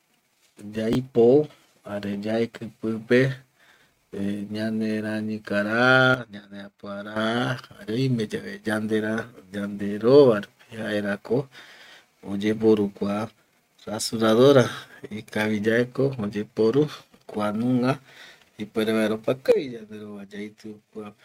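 At 0.93 s to 0.95 s the speech briefly scrambles: chunks out of order. A 10 ms piece of audio arrives one chunk late and plays after the piece that should have followed it. Nothing drops out, so there is no gap or silence. Instead, three hard joins produce a tiny jumbled flicker, which is what sets it apart from a dropout.

At 6.14 s the whole signal steps down by about 10 dB, speech and background noise together, and at 7.16 s it steps back up. A second drop of about 9 dB begins at 19.52 s and lasts to the end. The instant, shared change in level, with no fade, points to a sudden gain jump, likely a digital gain setting applied without a ramp. Compression or automatic gain control would instead move gradually and follow the speech level.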